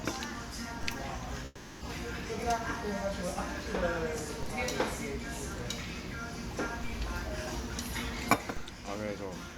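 A DC step occurs in this recording of everyday sound at 0.83 s and again at 6.84 s. The waveform's zero line abruptly shifts, and the offset lasts until 4.43 s and 8.57 s respectively. Each step produces a low thump while the sound carries on unchanged. A long network dropout follows from 1.45 to 1.83 s, where about 360 ms of audio is replaced by a fading continuation of the preceding sound. This likely comes from packets that never arrived, with the receiver's concealment filling the gap, and the missing material is not recovered when the sound resumes.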